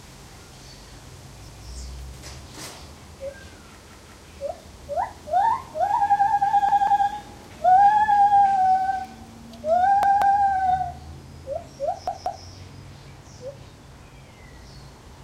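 At 1.49 s, then 3.90, 6.69, 10.03 and 12.07 s, a repeated buffer occurs: new audio arrived late, so the same roughly 186 ms piece, which fits an 8192-sample buffer, plays again. It repeats once at 1.49 s and twice at each later point. The result is a stuttering echo with hard joins, visible as identical copied waveform blocks and vertical seams on a spectrogram. Between these, bit error spikes at 8.12 and 9.05 s come from a flipped bit. Each is a sharp tick showing as a needle one to three samples thin in the waveform and a full-height vertical line across the spectrogram.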